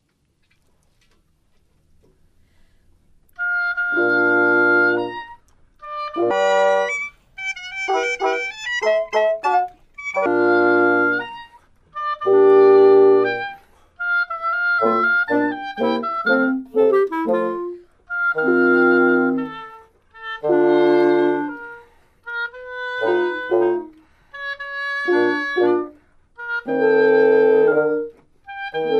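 A section at the wrong speed runs from 6.31 to 10.26 s: the audio there plays 1.64 times too fast, so it sounds hurried and roughly ten semitones higher before snapping back to normal. The likely cause is an editor or player running that stretch against the wrong clock. Because pitch and tempo jump together at the same instant, this is a speed error rather than a pitch shift or a time-stretch, each of which would alter only one.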